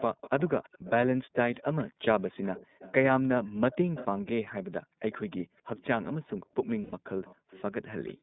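A speech recording carried over the iLBC codec throughout, with its audible damage plainly present. The line band runs from about 150 Hz to 3.7 kHz, so everything above that is gone and the voice sounds boxed-in and narrowband. On top of that the coding adds a slightly rough, synthetic grain to the voiced sounds, consistent with iLBC's 30 ms frame mode at its lower rate of roughly 13 kbps. A faint delayed copy of the voice sits behind the talker from 0.0 to 4.06 s, lagging by 243 ms, and again from 5.12 to 6.05 s and 7.24 to 8.13 s, lagging by 274 ms. The first stretch is about 20 dB below the direct speech and the later two are around 25 dB down. This is an echo leak, likely from a far end on loudspeaker whose echo canceller left part of the returned signal in its microphone feed, so the voice came back a quarter-second late. The room background is also gated by the echo canceller. Between 2.66 and 3.61 s the ambience dips by up to about 28 dB for a few hundred milliseconds in total. 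From 4.82 s to the end it drops by as much as about 40 dB across well under a second of accumulated time. In both cases the canceller was clamping the microphone while it believed the loudspeaker was active, then releasing it so the room tone returns. Finally, lost iLBC frames produce a short held, buzzy vowel-like smear from 6.83 to 6.94 s. That 90 ms gap fits three consecutive 30 ms frames being replaced by a repeated pitch cycle blended with noise. Normal speech resumes immediately after, because each iLBC frame decodes without depending on the previous one.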